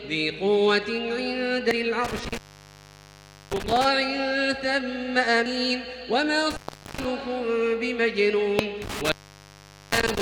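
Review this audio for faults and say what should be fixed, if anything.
Short chirps or blips at 1.71 s, 5.46 s and 8.59 s point to damaged data in a compressed stream. Corrupted bytes there make the decoder misread frames, lose sync and jump to the next valid frame header. Verifying file or stream integrity with checksums before decoding would prevent this.

The sound drops out with crackle at the edges, leaving faint hiss, from 2.05 to 3.85 s (open about 1.14 s), 6.50 to 7.05 s (about 0.42 s) and 8.82 to 10.22 s (about 0.81 s). This is an intermittent contact, a loose cable or plug briefly breaking the signal path. Reseating or replacing the faulty cable and connectors would stop these dropouts.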